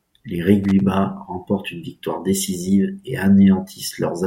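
Loose connector crackle from 0.64 to 0.80 s in this speech recording: a worn contact briefly makes and breaks, chopping the signal into an irregular scratchy burst.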